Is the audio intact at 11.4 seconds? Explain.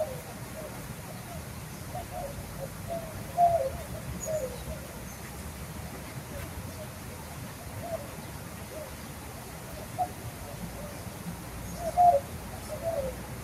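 No. At 11.4 seconds, as throughout the clip, a noise suppressor applied to music or sounds is at work. Built for speech, it mistakes sustained sound and ambience for noise. Onsets pass, but tails dip by around 5 dB, so the audio pumps and thins.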